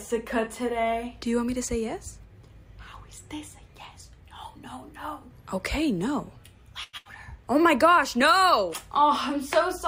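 At 6.83 s the sound stops moving and the last moment is held, stretched with a slight buzz or dip for about 98 ms, until 6.96 s. This is a short stall from a late packet. The packet due at that point had not arrived, so the jitter buffer emptied and the receiver prolonged what it already had. When the packet turned up, playback carried on from exactly where it paused, so nothing is lost, but the overall delay grows by about 98 ms.

Straight after, from 6.97 s to 7.08 s, there is a second hold that fades out before the audio jumps ahead. This is a burst of packet loss. Here the missing data never arrived in time to be played. The receiver filled about 80 ms by extending the last sound and lowering it, then resumed later in the stream, so about 80 ms of the original audio is gone.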